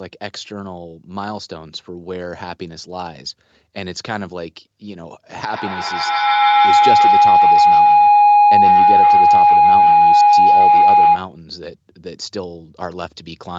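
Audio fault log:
5.49–11.41 s: feedback howl. A tone near 700 Hz builds up, with the loop repeating roughly every 150 ms, and peaks about 15 dB above the speech. Two devices on the call were sharing one room. Each pass through the loop added gain, so the repeats swelled into a tone.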